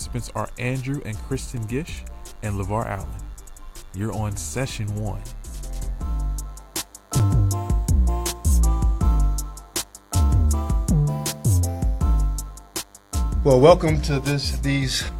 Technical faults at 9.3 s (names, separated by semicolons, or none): DECT cordless phone buzz